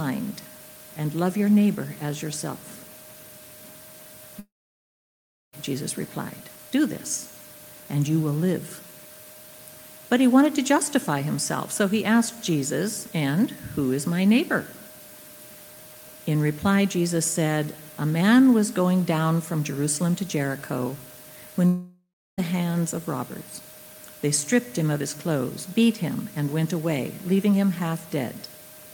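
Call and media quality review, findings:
Long network dropout, 4.39–5.55 s: sound collapses into a brief fading buzz, then about 1.05 s of silence; roughly 1.1 s never returns. Likely packet loss on the network path, with receiver concealment extending the last sound before giving up.

Long network dropout, 21.67–22.40 s: same fading-buzz pattern, longer tail, about 0.33 s silence, about 0.7 s lost. Likely a shorter interruption in packet arrival; playback resumes later in the stream.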